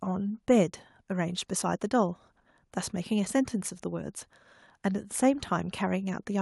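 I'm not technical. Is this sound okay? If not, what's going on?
Yes, this speech recording sounds fine. Nothing in it stands out as a technical problem.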